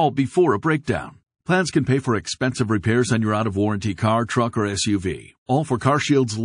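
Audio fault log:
throughout, MP3 compression: the speech has plainly audible codec damage, with a watery, swirling texture, which fits a low bitrate of around 40 kbps. The encoder likely ran short of bits, cut the top band at a fixed frequency and left weak frequency lines flickering on and off between frames. That flicker makes the smeared, metallic quality on sibilants and the softened consonant onsets heard across the whole clip.
0.84, 2.81, 3.96, 4.26, 5.46, 5.78 s, pre-echo: a brief hiss of 21 to 34 ms comes just ahead of each sharp onset, rising about 16 to 30 dB above the quiet before it, strongest at 5.46 s. The coding block is about 52 ms long and never switches to short blocks. Noise sized for each attack is therefore spread back into the silence before it, so the onsets arrive smeared rather than crisp.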